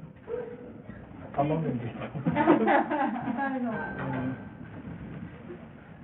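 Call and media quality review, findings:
Bluetooth SBC compression (likely cause), throughout: nothing above 4 kHz, heavy gritty grain and aliasing; a small bit pool, around 48 kbps, starves the upper sub-bands and coarsely quantises the rest.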